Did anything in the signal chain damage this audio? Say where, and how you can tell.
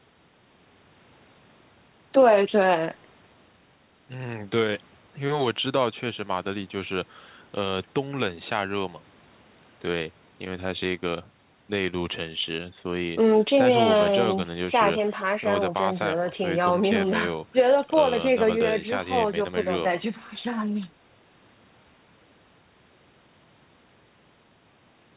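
No, nothing in the signal chain damaged this audio.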